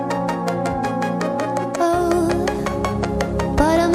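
Nothing here stands out as a technical problem; the audio simply runs its course without any glitch, dropout or odd artefact catching the ear along the way.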